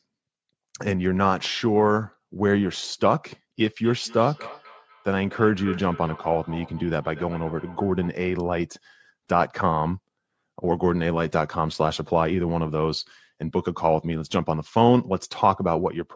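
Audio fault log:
3.6–8.21 s, feedback echo between two devices: the speech returns at a steady interval of about a fifth of a second, each repeat thinner and more ringing, the loudest about 18 dB below the direct speech. A second device in the room played this call aloud, and this microphone picked that playback up and sent it round again. Each device's echo canceller removes only its own output, so nothing stripped the returning sound, whose top stops at 8 kHz like the rest of the call audio.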